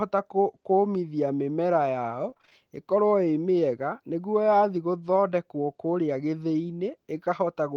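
A speech clip carried over a call path whose spectrum tops out near 12 kHz, which fits Opus at around 24 kbps. Between "kũmithia mĩmera yao" and "ĩkorwo ĩ mĩega nĩguo", from 2.29 to 2.53 s, repeated packet loss makes it choppy and robotic. Six gaps, the longest 24 ms, are patched by stretching the preceding sound, so about half that span is filled in. On a spectrogram this appears as smeared, repeated harmonic bands with ragged breaks, and the waveform shows short stuttering repeats.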